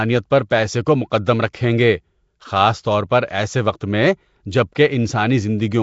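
Speech throughout carries a rough, hissy halo and a smeared, underwater character, with the top end cut off sharply so that nothing is present above 7.7 kHz. The likely cause is Nellymoser compression: the Flash-era Nellymoser Asao codec codes short blocks at a fixed, low bit depth, starves quiet bands of bits entirely, and refills them with noise, and the amount of damage points to a bitrate in the region of 32 kbps. Three sharp onsets are preceded by a brief smear of hiss: at 0.49 s, spread over about 17 ms, and at 1.53 s and 4.75 s, each spread over about 11 ms. This is pre-echo. The coding noise is distributed across a whole transform block, so when an attack lands late in a block, noise meant for the loud part leaks into the silence ahead of it and softens the attack.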